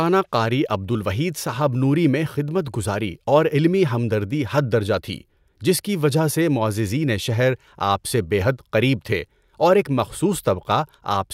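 No technical faults can be heard anywhere in this speech.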